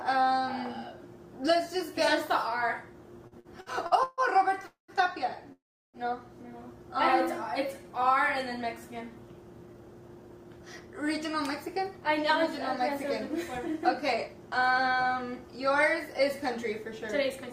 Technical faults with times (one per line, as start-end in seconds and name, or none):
3.27-4.21 repeated stalls (stutter)
4.66-4.91 call audio freeze
5.52-5.97 call audio freeze
7.67-7.92 jitter buffer slow-down
9.66-12.44 jitter buffer speed-up
12.92-14.79 jitter buffer speed-up